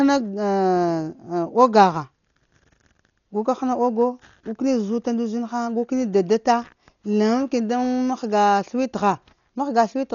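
Throughout the speech the sound is dull and muffled, with nothing above about 6.9 kHz and a rough, fluttering noise around tones. This is likely heavy Dolby Digital compression, with damage that fits a bitrate near 40 kbps and starved frequency lines filled with noise.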